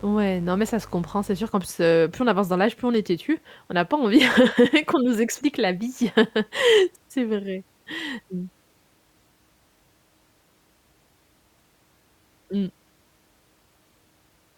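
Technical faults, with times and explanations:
0.0–1.5 s, mains buzz: A steady, raspy buzz sits under the speech from the very start and stops just before "qu'en plus heu plus". Its harsh edge comes from sharp switching spikes, the kind a dimmer, rectifier or unshielded cable injects twice per 50 Hz cycle. That gives a 100 Hz repetition with a dense series of 50 Hz harmonics extending into the kilohertz range. It runs roughly 25 dB below the speech.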